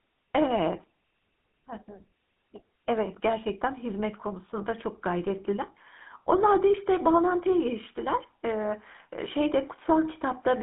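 Speech, passed throughout through a GSM full-rate codec: the band is limited to roughly 250 Hz to 3.5 kHz, and the excitation, rebuilt from sparse regular pulses, gives a plainly audible buzzy, gravelly roughness, which fits the 13 kbps full-rate coder.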